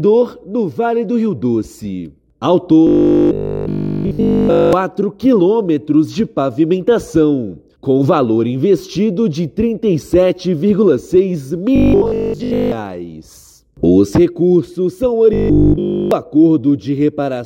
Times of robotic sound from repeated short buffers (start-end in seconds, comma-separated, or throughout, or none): 2.87-4.73, 11.76-12.72, 15.33-16.11